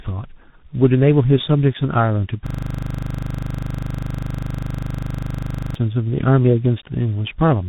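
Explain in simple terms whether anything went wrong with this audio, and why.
A system hang loop runs from 2.47 to 5.75 seconds. The computer stalled while the sound hardware kept replaying the same 40 ms scrap of speech, dozens of times over, 25 times a second, which comes across as a steady, rough buzz instead of speech.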